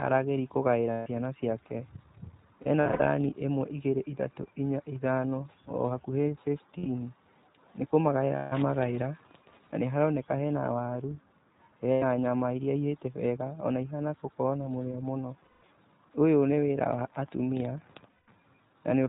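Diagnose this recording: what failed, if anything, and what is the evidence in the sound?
iLBC codec, present for the whole clip, at the codec stage. All speech energy stops at 4 kHz, and the voice has a rough, slightly synthetic grain that is plainly audible. Each short frame's excitation is coded on its own without borrowing from the previous frame, which trades some naturalness for robustness. The frame rhythm and quality point to iLBC's 15.2 kbps mode with 20 ms frames.

Lost iLBC frames, a network-stage fault, at 0.93 to 1.08 s, 2.62 to 3.08 s, 6.78 to 6.88 s, 8.36 to 8.54 s, 11.92 to 12.04 s, 15.44 to 15.64 s and 18.12 to 18.30 s. Each gap becomes a held, faintly buzzy vowel because the decoder repeats the last pitch cycle mixed with noise. The lost stretches last between 80 and 220 ms. At 2.62 s, the losses are scattered in short runs over about 440 ms. Speech recovers almost immediately after each gap because the frames decode independently.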